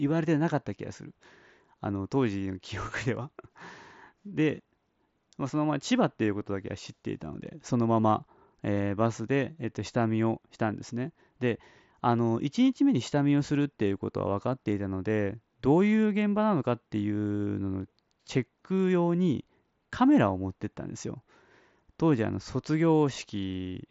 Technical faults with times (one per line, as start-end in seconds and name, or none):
none